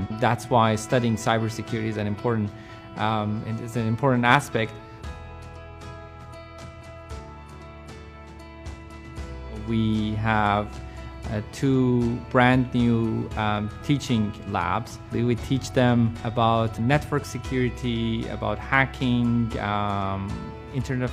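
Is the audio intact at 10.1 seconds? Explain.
Yes, the audio is intact at 10.1 seconds, with nothing at that moment that breaks, drops out or distorts the sound.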